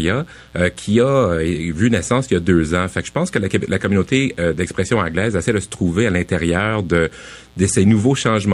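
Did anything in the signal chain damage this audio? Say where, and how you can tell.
Yes. Mains buzz runs through the whole speech clip, a steady raspy buzz around 30 dB below the voice. It enters at the analogue wiring stage: a dimmer, rectifier or poor shielding couples switching spikes at 120 per second on 60 Hz mains, spreading harmonics into the kilohertz range.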